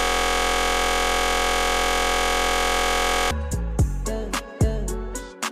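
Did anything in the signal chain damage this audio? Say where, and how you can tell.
Yes, at the driver or buffer stage. A system hang loop is already under way as the audio opens and runs to 3.31 s. One 23.22 ms slice repeats identically as a steady 43.1 Hz buzz, which fits a frozen 1024-sample ring buffer. Network packet-loss concealment would vary or fade instead.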